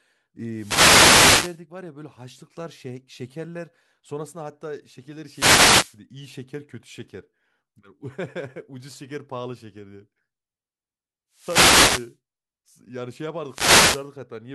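Wireless microphone noise hits at 0.52–1.62, 5.24–5.99, 11.32–12.16 and 13.45–14.11 s: the FM signal fades and receiver static swishes up.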